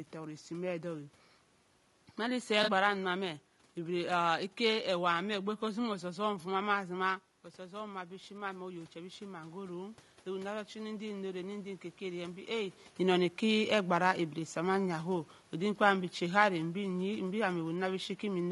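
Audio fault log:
throughout: low-delay AAC compression. The speech is rough and grainy, with a hiss filling the gaps between voice harmonics and a top band that sounds dulled and somewhat synthetic. This is likely AAC-ELD coding, whose short frames of about 10 ms cannot separate closely spaced pitch harmonics well and spend bits inefficiently. The damage is plainly audible and fits a bitrate around 32 kbps, too low to keep the harmonic structure clean.
2.63–2.70 s: AAC frame loss with concealment. A brief smeared, noisy patch interrupts the speech for about 40 ms of lost audio, which points to two consecutive frames missing. The decoder covered the gap by reusing the spectrum of the last good frame with altered phase and energy, so the fill keeps roughly the right tone colour but loses the fine detail and sounds phasey. The gap is too short for any fade toward silence.
7.56–12.58 s: automatic gain rising. 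Just after "famma zima" the input level drops by about 10 dB, consistent with the talker moving away from the microphone around 7 s. The gain control responds by climbing about 8 dB over roughly five seconds. Voice and room noise swell together as it does, which marks this as a gain change rather than the talker returning, though the talker does move again near 12.5 s.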